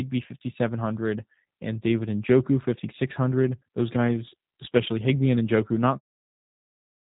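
Throughout, G.729 codec coding leaves speech rough and faintly synthetic, with nothing above 3.8 kHz, consistent with 8 kbit/s G.729A; the short fade-out near 6 s is smooth.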